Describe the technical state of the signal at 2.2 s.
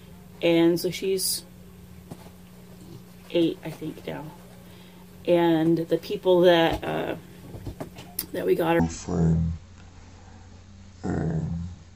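At 2.2 s the signal is intact, with no audible fault at that moment.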